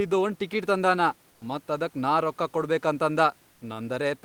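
From 1.31 to 1.41 s, and again from 3.51 to 3.61 s, comfort noise replaces the background. The room noise drops out for 100 ms each time. A flat, featureless hiss fills the gap, about 2 dB and then about 1 dB quieter. Discontinuous transmission, likely Opus DTX, is the cause.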